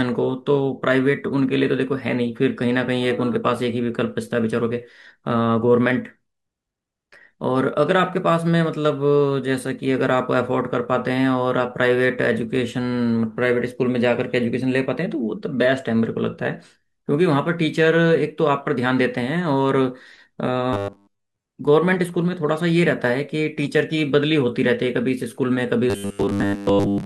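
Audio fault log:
20.73–21.46 s and 25.90–27.05 s, robotic sound from repeated short buffers: the speech collapses into a rigid, metallic buzz at 100 Hz that still loosely tracks the words. This is likely caused by audio arriving too seldom, with the gaps filled by looping the last 10 ms so that most of the real signal is skipped. On a spectrogram this shows as a fixed comb of harmonics spaced 100 Hz apart, and the waveform shows near-identical 10 ms cycles repeating.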